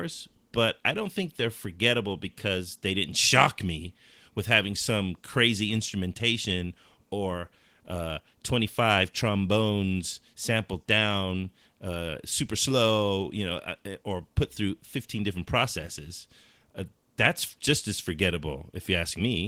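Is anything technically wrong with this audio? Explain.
No, the speech comes through Opus voice compression in its normal working state, with the full audio band kept and no technical fault to be heard.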